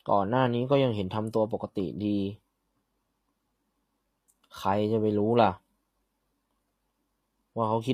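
HE-AAC compression runs through the whole speech recording, and the damage is plainly audible from start to finish. The likely cause is a low-rate HE-AAC encode, consistent with roughly 24 kbps. Only the lower spectrum carries real detail; the treble is synthesised by copying lower bands upward under a coarse envelope, so the top end sounds bright yet false. Sibilants come out gritty and lispy, with a metallic sheen where upper harmonics fail to align.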